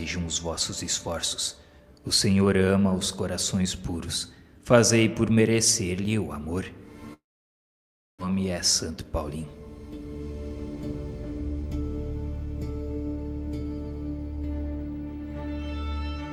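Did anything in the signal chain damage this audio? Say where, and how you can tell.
Yes. From 7.13 to 8.23 s the sound gives way to a fading buzz, then close to a second of near-silence, and resumes with about a second missing. This is likely a long network dropout: packets stopped arriving, concealment ran out, and playback skipped the lost stretch.

Just after, from 8.90 to 9.38 s, the audio runs hurried at unchanged pitch, about 111% speed. That is a jitter buffer speed-up: the receiver trimmed short pitch-period pieces, around 70 ms in total, to drain a backlog of buffered audio.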